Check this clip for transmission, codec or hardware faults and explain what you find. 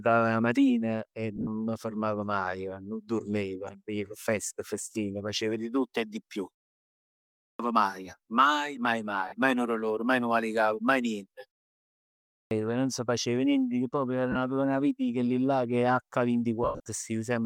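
Two kinds of fault are present in the speech: lost LE Audio frames and clipped starts after pauses.

Lost LE Audio frames: at 1.36–1.47 s, 9.28–9.32 s, 14.32–14.36 s and 16.63–16.80 s, the speech turns briefly into a noisy, smeared hiss. Dropped Bluetooth frames were concealed by the LC3 decoder replaying the last spectrum with randomised phase. The 37.5 ms gaps fit five 7.5 ms frames. The first and last events are scattered, about 67.5 ms lost over 105 ms and 165 ms over 210 ms, with runs near 40 ms and 100 ms. The longest run fades audibly.

Clipped start after a pause: at 7.0–7.59 s and 11.9–12.51 s, speech bursts in abruptly, missing its opening. After pauses of about 0.53 s and 0.47 s the output device slept, and about 0.59 s and 0.61 s of sound were swallowed while it woke.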